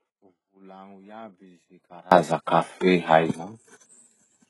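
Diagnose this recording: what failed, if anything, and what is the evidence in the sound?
The opening stretch, from the very start to 2.12 s, is an audio dropout to a faint residue: the dropout is already under way when the clip begins, leaving only a thin leak of the speech about 30 dB below its normal level, and the full signal snaps back abruptly at 2.12 s. A faint trace persisting under the gap, plus the hard edge on return, separates this from a pause or a fade. The likely stage is the network or transmission path, where the signal was lost while the path after the break stayed live.

Throughout, the speech carries heavy HE-AAC compression, a codec fault. Nothing reaches above 11.5 kHz, and the treble that remains is synthetic: spectral band replication copies lower bands upward under a coarse envelope, so s sounds come out gritty and lispy and harmonics fail to line up across the crossover. 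That bright-but-false treble, rather than a plain dull low-pass, distinguishes it from ordinary band-limiting. The damage points to a very low bitrate, likely around 12 kbps.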